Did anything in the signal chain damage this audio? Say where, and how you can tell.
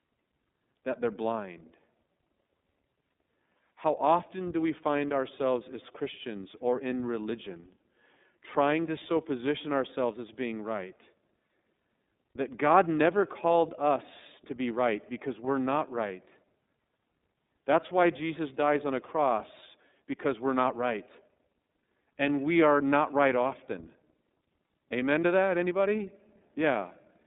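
Yes, at the codec stage, for the whole clip. This speech has gone through the iLBC codec. The band runs from about 200 Hz to 3.7 kHz with nothing above 3.8 kHz, so it has that thin phone-line sound. The codec damage is plainly audible as a rough, slightly synthetic sound. That comes from each frame's excitation being coded on its own. The texture fits 30 ms frames and the 13.33 kbps mode.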